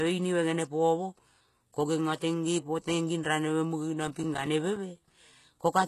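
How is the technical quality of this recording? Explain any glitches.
The recording has two problems: codec damage runs through the whole clip, and a burst of crackle breaks up the speech near the end.

Throughout, the speech has plainly audible compression damage. Nothing is present above 12.3 kHz, and the treble that remains has the gritty, metallic or lispy character of reconstructed highs rather than real ones. This likely comes from HE-AAC compression at a low bitrate, which fits around 16 kbps. The codec keeps only the lower spectrum and fakes the top by copying lower bands upward under a coarse envelope, so harmonics fail to line up across the join.

From about 4.08 s to 5.1 s, just after "raneve muge", a processor overload crackle tears through the sound. This is a rapid run of tiny silent dropouts, around ten of them, each a few milliseconds long, which fits buffers of roughly 5 ms. 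The processor repeatedly missed its deadline to finish each small audio buffer. Every missed buffer became a hard-edged gap of silence, and the cluster of gaps is heard as gritty crackle that stops once the load eases.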